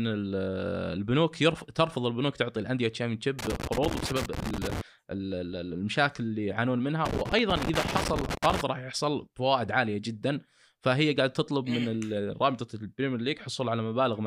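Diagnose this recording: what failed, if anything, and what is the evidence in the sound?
Analogue wiring failed: loose connector crackle in two irregular scratchy bursts, 3.39 to 4.81 s and 7.06 to 8.61 s. A worn contact making and breaking chops the speech. The spacing is ragged, unlike evenly spaced buffer-underrun clicks.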